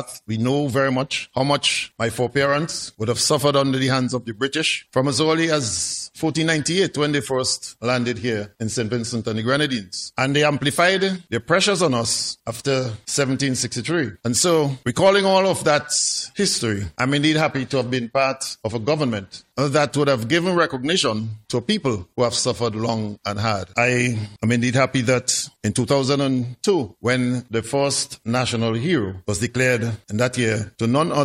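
No technical faults are audible.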